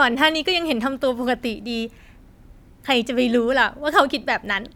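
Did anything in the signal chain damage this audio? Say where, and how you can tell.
No, nothing in the chain damaged this speech recording.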